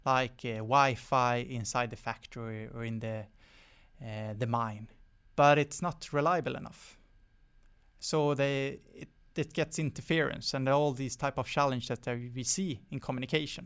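From 6.24 to 8.12 s, after "mine but it's not" and before "they it it gets", a resampler restarted on every block. Each 40 ms block was converted alone, with no memory of its neighbours. Every block edge therefore carries a small error. The result is a rough buzz at 25 Hz riding on the speech, heard only while sound is present. The pattern fits a conversion from 24 kHz to 16 kHz.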